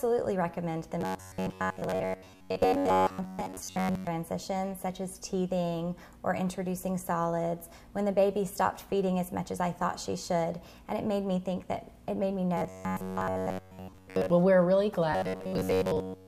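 From 1.01 to 4.08 s, 12.57 to 14.30 s and 15.13 to 16.27 s, robotic sound from repeated short buffers gives a rigid buzz near 94 Hz. A roughly 11 ms slice likely repeats, replacing most of the audio.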